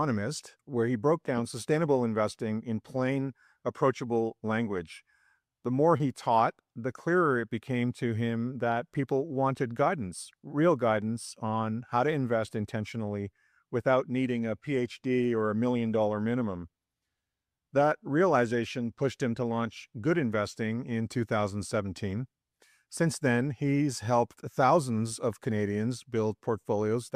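A single short concealed packet loss occurs between 5.97 and 6.01 s, where about 20 ms of audio failed to reach the decoder in time. The receiver filled the hole by extending the preceding sound and then blending back, which produces a brief smear or wobble. A plain dropout would leave a hard gap of silence, and a click would add a sharp transient. Here the sound instead carries on unnaturally.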